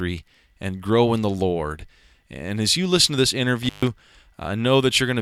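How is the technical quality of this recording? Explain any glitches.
The recording has one clear glitch, an intermittent contact. Between 3.62 and 3.88 s the speech briefly drops out, with crackle marking the edges of the gap. A loose cable or plug momentarily lost its connection, opening the signal path for about 135 ms before contact returned.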